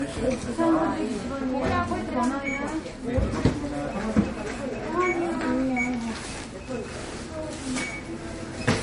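Across the whole clip, the audio was likely low-bitrate audio saved at a high bitrate: an earlier MP3 pass, which fits roughly 40 kbit/s, stripped detail that a later high-rate save cannot recover. Nothing sounds above 10.6 kHz, leaving the top dull and swishy.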